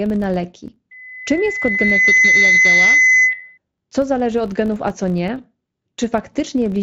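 From start to finish the speech carries a 50 Hz buzz that rises and falls with its loudness. This is a filter restarted on every block: each block begins from an empty state, leaving a small transient at every boundary. On the waveform these are regular ticks every 20 ms. On a spectrogram they form evenly spaced vertical striations and a comb of harmonics at multiples of 50 Hz.

At 0.91 s a loudspeaker feedback squeal begins at 2 kHz. The microphone is picking up its own loudspeaker, and at that frequency the loop gain exceeds one, so the tone feeds itself. It swells over about one and a half seconds to roughly 10 dB above the speech and cuts off at 3.58 s. A spectrogram shows a single bright horizontal line that thickens and brightens. The waveform's envelope bulges with a steady sinusoid.

At 3.31 s, just before the squeal ends, and again at 5.37 s, there is VoIP packet loss concealed by the speech codec. 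Each gap is about 20 ms, one frame, and the decoder fills it by extending its last pitch and spectral shape at falling gain. The result is a brief buzzy smear that briefly weakens the speech that follows. On the waveform it is a short stretch of repetitive, decaying cycles. On a spectrogram it is a blurred vertical band where harmonics flatten. The Speex coding itself leaves little audible colouring.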